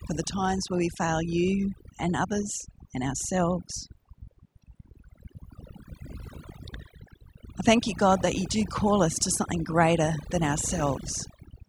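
Overdone noise removal runs through the whole recording, from the first second to the last. A noise reduction stage was pushed too hard, so any frequency band sitting close to its estimate of the background noise gets pulled far down or switched off entirely. Quieter parts of the speech fall below that line and vanish with the noise. The gaps between phrases drop to near silence scattered with twinkling specks.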